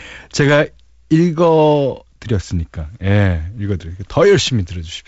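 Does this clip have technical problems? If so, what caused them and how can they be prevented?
No, the speech carries the expected signature of G.722 wideband telephone coding, with content ending near 7.7 kHz and a light coding texture that points to a 48 kbit/s mode, and nothing here needs fixing or preventing.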